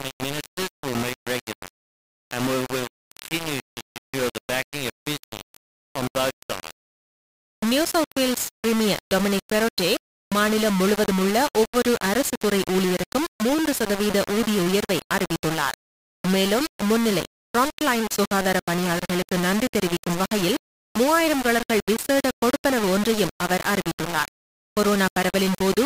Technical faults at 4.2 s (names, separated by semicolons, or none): low bit depth without dither